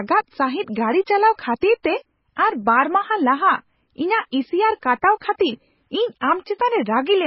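Throughout the speech, nothing is heard above 5.5 kHz. Sibilants sound dull and watery, with a swirling, chirpy texture. This is likely heavy MP3 compression, which fits a very low bitrate near 16 kbps. The encoder dropped the treble and switched weak detail on and off.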